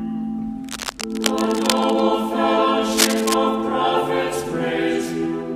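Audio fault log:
0.62–2.01 s and 2.92–3.34 s, cable scratch noise: dense, uneven bursts of scratchy rustling sit over the sound, about 10 dB under it in the first stretch and roughly as loud as it in the second, likely from a worn cable or connector being moved so its contact resistance jumps around.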